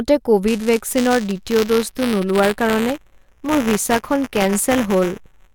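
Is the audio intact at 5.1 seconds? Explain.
No. Buffer tearing runs from 0.48 s to the end, so 5.1 s falls inside it. Writer and reader cross within each buffer, splicing in a sliver of audio from about 10 ms earlier. That gives a rattling 188 Hz buzz, which fits a 256-sample buffer. It shows as regular waveform jumps and evenly spaced vertical striations on a spectrogram.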